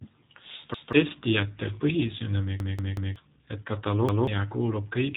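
G.729 codec damage runs through the whole speech clip. This 8 kbit/s VoIP coder models each 10 ms frame as a vocal tract filter plus pitch prediction and a handful of pulses, and here it leaves the speech audibly rough and slightly synthetic. The band is cut off at about 3.8 kHz, so sibilants and breath sound dull and there is no air above that point.

Repeated buffer faults occur at 0.74 to 0.93 s, 2.60 to 3.16 s and 4.09 to 4.27 s. Each time, fresh audio failed to arrive and the same 186 ms block was played again, which fits an 8192-sample buffer. The first and last repeat once, swallowing roughly a fifth of a second of new speech. The middle one loops three extra times and loses about half a second. Each repeat is heard as a stutter with hard joins.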